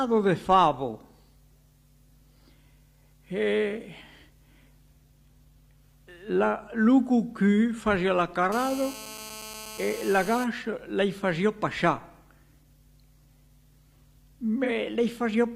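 From 8.52 s to 10.44 s a hard, raspy buzz sits under the sound at about 16 dB below it: GSM phone buzz. A nearby 2G handset on an active call transmits in bursts at 216.7 Hz, and the audio circuitry rectifies those radio pulses into an audible tone rich in harmonics. Because the phone is in a call, the buzz holds nearly steady rather than stuttering, and it bears no relation to the programme material.

At 14.64 s to 14.70 s a brief smeared, noisy patch of about 43 ms interrupts the audio. This is AAC frame loss with concealment. The decoder, missing data for that stretch, rebuilt it from the last good spectrum instead of the real content, which produces the blurred, phasey texture. The gap's length fits a single lost frame, so the concealment never decays toward silence before normal decoding resumes.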